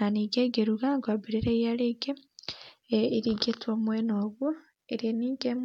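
No technical faults can be heard anywhere in the recording.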